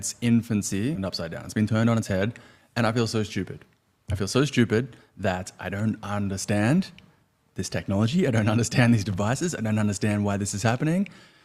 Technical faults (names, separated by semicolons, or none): skip ahead; jitter buffer speed-up